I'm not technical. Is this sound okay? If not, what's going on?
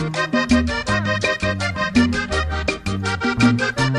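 Yes, nothing wrong here.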